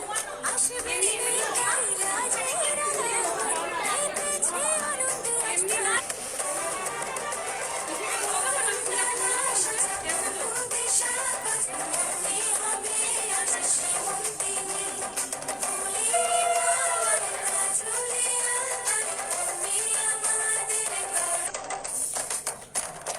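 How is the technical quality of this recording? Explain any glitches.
The recording has three brief glitches from damaged data in a compressed stream, at 5.95–6.01 s, 13.01–13.06 s and 21.46–21.51 s. Corrupted bytes make the decoder misread frames and resynchronise, producing short glitches, each seen as a narrow broadband smear in the spectrogram and an abrupt waveform discontinuity.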